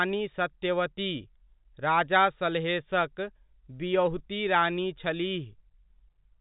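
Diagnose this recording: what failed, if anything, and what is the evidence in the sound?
Nothing here has failed: the speech has simply been through ordinary G.711 telephone coding, which is why the top end stops at about 3.8 kHz, and that is the normal telephone band rather than a fault.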